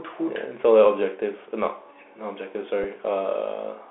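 Throughout, the speech carries a Bluetooth CVSD headset codec. The band is held to 250 Hz to 3.5 kHz. Its one-bit coding leaves plainly audible scratchy, granular distortion.

At 2.84 s there is a Bluetooth headset packet repeat. About 7.5 ms of audio is replaced by repeated data, which fits two lost packets. It sounds like a brief buzz near 267 Hz.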